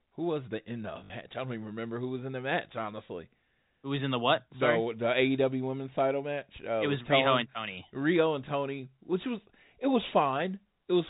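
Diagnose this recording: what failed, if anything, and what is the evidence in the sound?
Packet loss with the last packet repeated, 1.04 to 1.10 s, at the network stage. For about 60 ms the same short slice of speech plays over and over, which fits three lost 20 ms packets concealed by replaying the last good one. Each replay restarts out of step with the pitch, so the run takes on a brief robotic buzz near 50 Hz. It sits inside the G.711 telephone band, which stops at 4 kHz.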